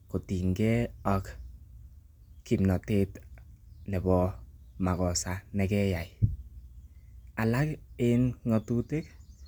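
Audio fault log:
Nothing to log here, as the speech runs along without a single fault turning up anywhere.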